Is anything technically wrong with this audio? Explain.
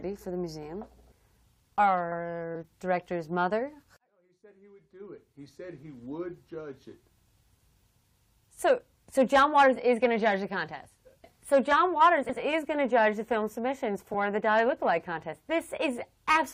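Yes. At 2.54 s and 14.13 s there is damaged data in a compressed stream: the decoder misreads corrupted frames and briefly loses sync, giving a short blip.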